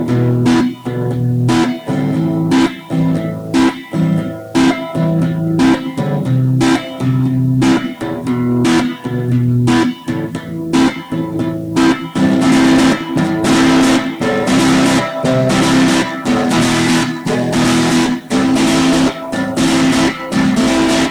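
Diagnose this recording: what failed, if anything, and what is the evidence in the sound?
Low bit depth without dither throughout, likely a sample-format conversion rounding to about 7 bits: grainy distortion tracks the sound, sitting roughly 35 dB below it, and quiet passages turn gritty.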